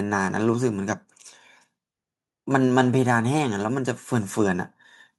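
Nothing here trips any alarm: no technical faults turn up anywhere in this short bit of speech.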